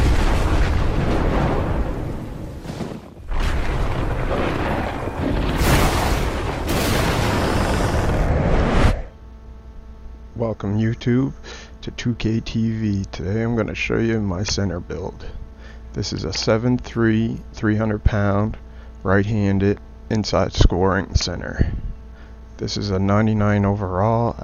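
Nothing in the signal points to a technical problem; level, continuity and timing hold steady throughout the recording.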